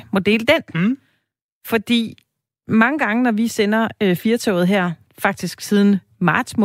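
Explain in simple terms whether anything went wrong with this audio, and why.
Nothing went wrong with this speech recording.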